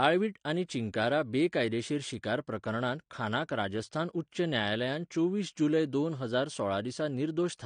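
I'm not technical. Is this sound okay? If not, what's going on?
No. AAC compression damage, likely the cause, runs through the whole clip. Everything above about 9.9 kHz is missing, so the speech sounds dull, and the squeezing leaves a watery, fizzy smear on hissy sounds like s and sh.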